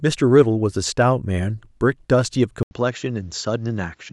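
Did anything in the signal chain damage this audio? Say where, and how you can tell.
Yes. At 2.63 s the recording chain likely switched its input to a poorer device, a driver-level change of capture source that holds to the end of the clip. An 80 ms gap marks the switch, and afterwards the speech loses everything above 7.6 kHz, so it turns duller and boxier. It also drops to roughly 5 dB quieter and gains a new background noise floor some 45 dB below the speech, the new microphone's own tone and hiss replacing the old.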